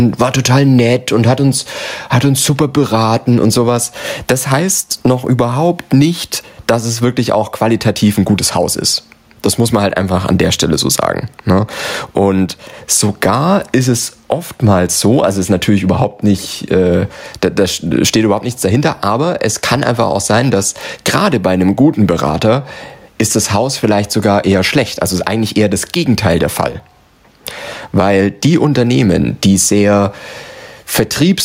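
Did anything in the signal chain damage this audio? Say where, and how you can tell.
Yes, there's gain pumping right through the clip, and it's coming from the input stage. The level swings by something like 15 dB. Likely cause is the mic gain being cranked way too high and a fast limiter or compressor clamping down on each loud syllable, so everything gets squashed toward one level.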